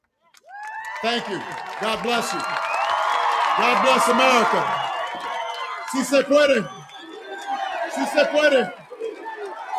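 Throughout the clip, a noise suppressor applied to music or sounds is acting on audio even though it was designed for speech. It mistakes sustained tones, ambience and reverberant decay for background noise and pulls them down, while sharp onsets slip through. The gain it applies swings by around 10 dB, so the level pumps and the sound thins between attacks. Unlike a plain gate, it does not shut off cleanly. It rides the level up and down in a continuous pattern.

Four spans show sound cut by the noise suppressor. From 0.22 to 0.48 s, roughly a fifth of a second dips by up to about 14 dB. From 5.06 to 5.95 s, the dip reaches about 9 dB. From 6.63 to 8.17 s, it reaches about 16 dB. From 8.66 s to the end it reaches about 19 dB. In each span, held or fading material sinks or has its tail clipped short. The sound never drops out completely, which separates these spans from a dropout.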